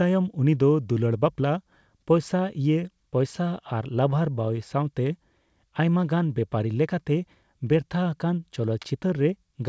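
Clock drift between sender and receiver runs through the whole clip, with the sender's clock running roughly 4 percent fast. Samples arrive quicker than the receiver plays them out, so its jitter buffer keeps creeping toward overflow. Over this passage the drift is a persistent timing problem rather than a single event. The level of drift is large enough that the buffer cannot simply absorb it, and the receiver has to intervene continuously.

Repeated timing corrections follow from that drift, running from 0.08 s to 9.68 s. The receiver repeatedly trims short pieces of audio to keep pace with the faster sender, giving an effective speed of 104 percent. Every edit goes the same way, removing material, but the edits are spaced unevenly. Each one is small, heard, if at all, as slight hiccups or a subtly uneven tempo rather than obvious gaps, over the G.722 call path with nothing above 8 kHz.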